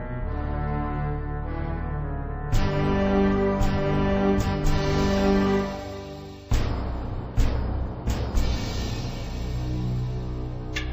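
From start to finish everything plays slowly and sounds heavy and sunken: the pace is halved and the pitch sits a full octave, 12 semitones, below where it belongs, with a faint ghostly copy of the sound overlaid high in the spectrum. The fault is stereo read as mono. Left and right samples, stored alternately, were taken as one continuous channel, so every moment is stretched across twice as many samples. The alternation between channels creates that mirrored upper image.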